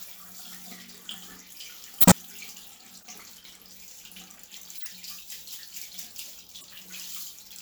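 At 2.00 to 2.12 s, 3.02 to 3.07 s, 4.77 to 4.86 s and 6.56 to 6.64 s, the everyday sound is interrupted by a corrupt frame decoded: damaged compressed data was played regardless, so misread gains and codes push energy into the wrong frequencies. Each comes out as a brief chirp or noise burst. The first is loudest and the one at 3.02 s faintest. On a spectrogram each shows as a blocky, out-of-place smear, with a short spike on the waveform.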